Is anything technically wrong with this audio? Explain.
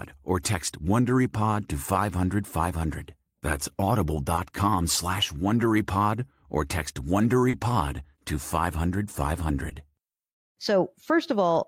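Yes. There is short concealed packet loss at 4.35 to 4.39 s, 7.49 to 7.55 s and 9.69 to 9.73 s: about 20, 40 and 20 ms of the speech arrived too late to decode. The receiver extended the preceding sound to fill each gap and then blended back in, leaving brief smears or wobbles where short consonants can disappear.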